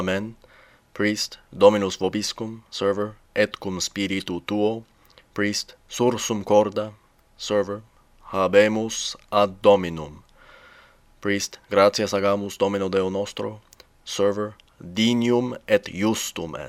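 No technical faults can be heard anywhere in this audio, and the signal holds steady throughout with nothing breaking its continuity.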